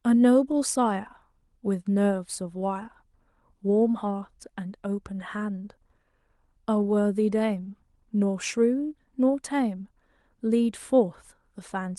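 No technical faults can be heard anywhere in the speech.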